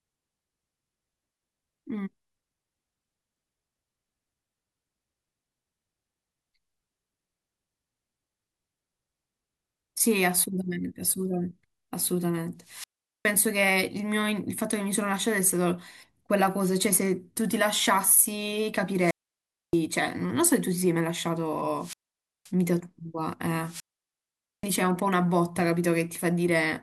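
The speech suffers four wireless microphone squelch dropouts, at 12.61–13.36 s, 18.96–19.81 s, 21.77–22.52 s and 23.62–24.73 s. Each time the fading radio link lets hiss swell before the receiver's squelch mutes for 0.41, 0.62, 0.52 and 0.83 s. This shows as a broadband noise smear, then a flat, empty waveform gap.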